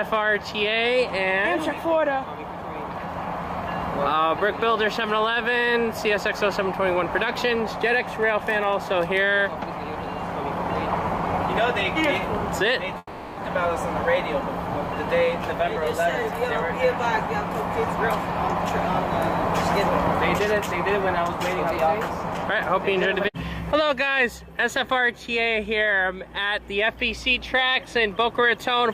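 From 12.97 to 13.39 s there is a long network dropout. About 0.4 s of audio likely never arrived. The receiver fills the hole with a fading buzz or hiss, then a brief silence. The sound resumes with that stretch missing.

At 20.07 to 20.10 s a single loud pop cuts in. It peaks roughly 10 dB above the surrounding sound. A sudden voltage step, likely from a plug, switch or static, caused it. The sound continues beneath it.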